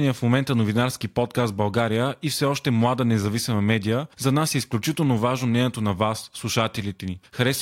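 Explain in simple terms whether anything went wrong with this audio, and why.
Nothing went wrong here: the speech comes through steady and intact the whole way, with no technical problem audible at any moment.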